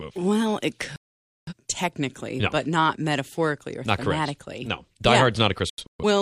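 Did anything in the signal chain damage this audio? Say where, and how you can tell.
Yes. A digital broadcast dropout at the reception stage: the speech mutes from 0.96 to 1.53 s, then breaks into several short holes between 5.70 and 6.04 s, the longest about 128 ms. The receiver muted on failed frames, and the waveform and spectrogram show empty gaps where the content is lost.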